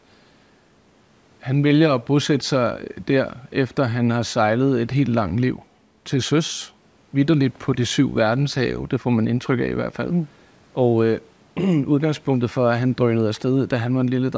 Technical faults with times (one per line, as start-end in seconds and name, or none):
none